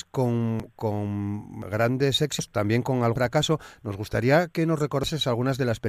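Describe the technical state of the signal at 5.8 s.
At 5.8 s the signal is intact, with no dropout, clipping, distortion or other fault audible at that moment.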